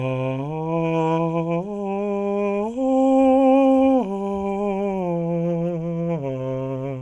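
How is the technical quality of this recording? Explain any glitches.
No technical faults can be heard in this music.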